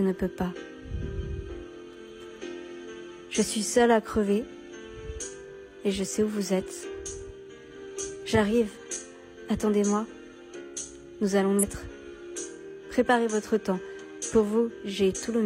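At 11.58 to 11.64 s, damaged data in the compressed stream leaves the decoder unable to read the frames there, so it loses sync and hunts for the next valid frame header. The result is a brief glitch of about 50 ms cutting through the sound.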